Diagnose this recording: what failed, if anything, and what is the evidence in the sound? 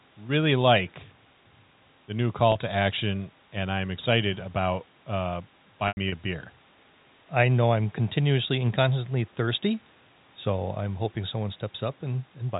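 Network trouble: packet loss with pitch repetition. The receiver loops the last pitch period, giving a quick buzzy hold after "the new" (2.52–2.55 s) and longer fading patches after "I'm excited about uh" (5.88–6.12 s).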